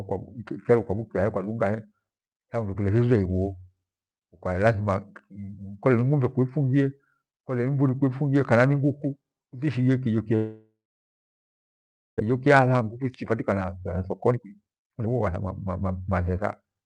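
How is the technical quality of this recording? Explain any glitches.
The recording has two clear problems in the latter part of the speech: a long gap, and then a hurried stretch that follows from it.

Long network dropout, 10.35 to 12.22 s, right after "ni nguku inike kiho": the sound trails into a fading buzz, then about 1.4 s of near-silence. Roughly 1 s of speech never returns. Unlike a brief packet-loss smear, the gap is long and the speech resumes further on. The likely cause is audio not arriving over the network.

Jitter buffer speed-up, 12.29 to 16.83 s: the receiver trims tiny pitch-period slices to drain the backlog left by the dropout, around 0.7 s in total. The speech runs about 16% fast and sounds rushed. Unlike a tape-style speed change, the pitch stays the same.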